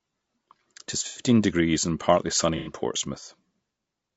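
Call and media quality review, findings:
Low-delay AAC compression, whole clip: speech rough and grainy, noise filling gaps between harmonics, top band thin and synthetic. Likely cause is AAC-ELD at a low bitrate, with character consistent with around 32 kbps. Short frames resolve pitch harmonics poorly and spend bits inefficiently, so damage is plainly audible.

AAC frame loss with concealment, 1.07–1.20 s, just before "degrees and partly sunny": smeared, noisy, phasey patch about 90 ms long, fitting roughly three lost frames. Decoder repeats the last good spectrum with scrambled signs or interpolated energy.

AAC frame loss with concealment, 2.57–2.71 s, just after "degrees and partly sunny": same smeared, phasey texture over about 90 ms, again fitting three consecutive lost frames concealed from prior spectrum.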